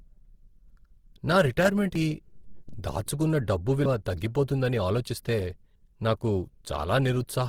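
The speech was likely squeezed through Opus compression in its music (CELT) mode at a low rate, one that fits something near 16 kbps. With too few bits, the encoder fills bands with folded or noise-like content instead of exact detail. The codec damage is plainly audible throughout: the voice comes out grainy and rough, with a noisy texture on voiced sounds, even though the bandwidth stays full and content reaches up to about 20.2 kHz. Separately, the recording chain likely worked in blocks of about 2.0 s and dropped a short stretch each time it moved from one block to the next, leaving audio missing between chunks. The edges were butted together with no gap, so at 1.95 s and again at 3.85 s the sound jumps forward abruptly, losing about a tenth of a second each time, a regular skip that sounds like a small piece cut out of the speech.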